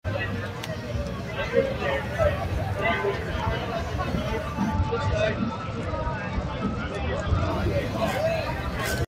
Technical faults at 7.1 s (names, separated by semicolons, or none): noise suppressor applied to music or sounds; Bluetooth SBC bit pool drop